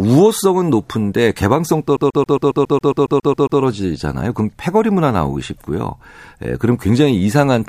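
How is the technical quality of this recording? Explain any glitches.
The recording is marred by one glitch, a CD stuck on one turn, from 1.97 to 3.61 s. A scratch keeps knocking the laser back one track, so the same 137 ms slice of speech repeats 12 times with a brief mute at each jump, giving a fast, even stutter. On a spectrogram it shows as identical short blocks tiled side by side; the waveform shows a regularly repeating shape broken by tiny gaps.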